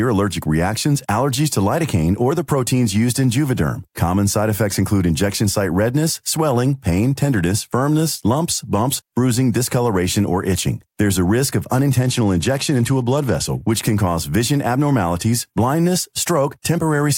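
From 11.99 to 13.72 s, after "a risk of" and before "can cause vision abnormalities", a Bluetooth SBC bit pool drop dulls the treble and adds gritty noise, consistent with a bit pool cut from 28 to 13 (about 102 kbps). A spectrogram shows the upper bands emptying and speckled quantisation noise.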